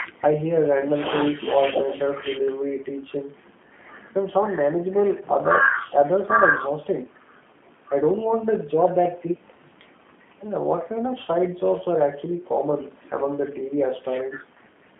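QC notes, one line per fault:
Throughout, G.729 codec: a narrowband speech codec that rebuilds each short frame from a vocal-tract filter, pitch predictor and a few pulses. The clip sits inside a 200 Hz to 3.4 kHz line band, so it sounds thin and boxy, with a plainly audible rough, synthetic edge consistent with an 8 kbit/s codec.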